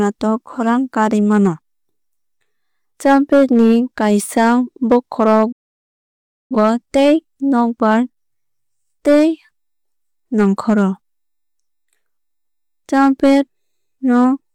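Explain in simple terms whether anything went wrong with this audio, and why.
Something did go wrong, at 5.52 s. The speech suddenly drops to silence, fading out in a tiny fraction of a second, and comes back at 6.56 s. That's a digital broadcast dropout: the receiver stopped getting frames it could trust, either because the signal vanished or because the data arrived corrupted, so it muted itself until clean frames turned up again. Whatever was said during that gap of about a second is simply gone.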